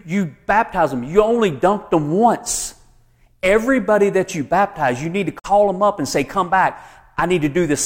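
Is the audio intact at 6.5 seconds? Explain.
Yes, at 6.5 seconds the speech plays through intact, with no audible fault at that moment.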